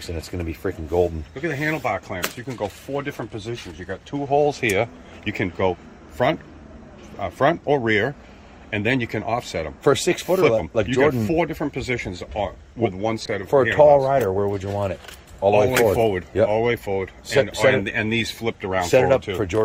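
A call bitrate drop hits this audio from 13.26 s to 19.01 s. The encoder's budget appears to fall from roughly 64 kbps to about 28 kbps, so it codes more coarsely, and the sound turns rougher and watery for that stretch.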